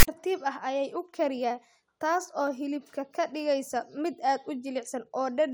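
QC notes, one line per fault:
0.00–0.08 s, file tags played as audio: a harsh, lopsided rasp with hard edges, then a short dead gap before "ah ayay u kariyaa". Text metadata was decoded as samples, so the character bytes become an offset buzz, and the zero padding that follows plays as silence.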